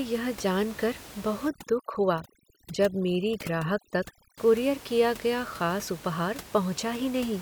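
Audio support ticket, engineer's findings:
Overdone noise removal, 1.48–4.38 s, after "जान कर", before "कूरियर किया गया". Denoiser set too strong: bands near noise estimate gated out, background twinkling. Room noise about 18 dB below speech.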